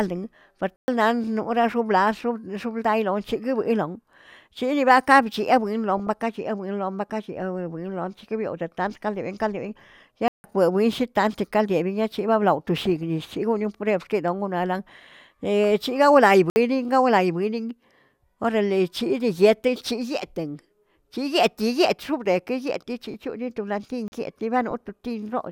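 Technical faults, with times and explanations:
0.76 to 0.88 s, 10.28 to 10.44 s, 16.50 to 16.56 s and 24.08 to 24.12 s, block of digital silence: the output buffer likely went unfilled and was replaced with zeros, so the speech drops to dead silence for 120, 160, 60 and 40 ms with no fade.
4.14 to 4.32 s, 5.97 to 6.21 s, 12.85 to 13.03 s (just before "shigonon prueb"), 15.64 s, 23.03 to 23.14 s and 24.71 to 24.99 s, DAB burbling: weak reception let bit errors slip past error correction into the MP2 data. Corrupted samples put short blips of noise in single sub-bands, and corrupted scale factors make sub-bands jump in level for up to a frame, over the speech.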